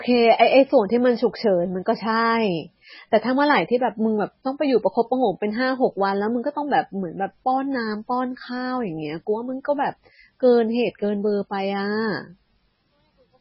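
Speech runs dull and watery from start to finish, with nothing at all above 5.6 kHz, a swirling, warbling texture on the voice, and chirpy metallic edges on the s sounds. The likely cause is heavy MP3 compression at a starved bitrate, which fits something as low as 16 kbps: the encoder has cut the treble at a fixed point and is dropping weaker frequency lines that flicker in and out from frame to frame.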